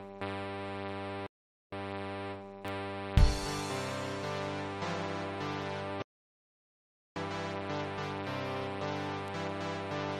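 At 1.27 s the music halts in a rebuffering stall: playback starves for data, holds silent until 1.73 s, then resumes exactly where it stopped, adding about 0.46 s. At 2.68 s a bit error spike, a single corrupted sample, produces one sharp broadband tick unrelated to the music. From 6.02 s to 7.16 s an audio dropout to silence cuts the music to silence with no room tone, and about 1.14 s of material is gone. The likely cause is a lost input with the recorder still writing zeros. A second one-sample bit error spike ticks at 9.28 s.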